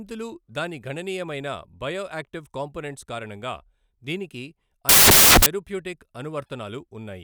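From 4.89 to 5.46 s the speech collapses into loud, harsh broadband noise: samples built from the wrong bytes, where each value is assembled misaligned or byte-swapped so the rapidly changing low bits dominate. Unlike a noise burst, it follows the signal.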